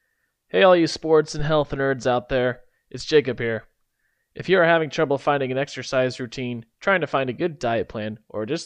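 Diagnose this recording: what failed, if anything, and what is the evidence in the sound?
A supply was switched on or off while the microphone input was live, causing a phantom power thump at the analogue wiring stage. The sudden voltage step passed through the input's coupling capacitors and arrived as a single low-frequency surge. It falls between "all you sports" and "nerds out there it's", from 1.39 to 1.70 s: a deep thump peaking at about -17 dBFS and decaying over 68 ms.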